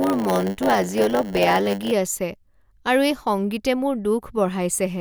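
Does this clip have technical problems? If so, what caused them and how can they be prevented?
Yes. From 0 to 1.92 s a block size mismatch (padded) leaves zero-filled gaps in every block, causing a 100 Hz buzz and slowing the speech to 0.919 speed at about normal pitch. On a waveform these appear as flat gaps every 10 ms, and on a spectrogram as harmonic lines at 100 Hz multiples. To prevent it, make sure the writing and reading stages use the same block size.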